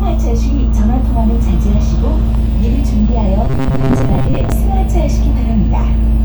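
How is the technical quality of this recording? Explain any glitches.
The recording has one clear glitch, robotic sound from repeated short buffers, from 3.45 to 4.52 s. New audio likely arrived too slowly, so roughly half of it was replaced by repeats of a tiny fragment, about 7.5 ms. That imposes a steady 134 Hz metallic buzz. Unlike a stutter, there are no audible gaps.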